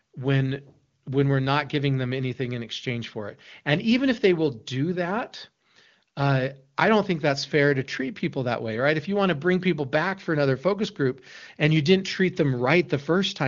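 No technical faults are present in the speech, which carries the band limit of the AMR wideband (HD Voice) codec at 23.85 kbit/s, with nothing above 7.4 kHz.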